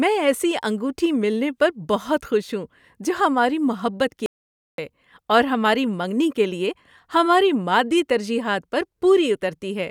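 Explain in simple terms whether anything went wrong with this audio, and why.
At 4.26 s the speech cuts to dead silence until 4.78 s, an audio dropout to silence, likely from the input briefly disconnecting.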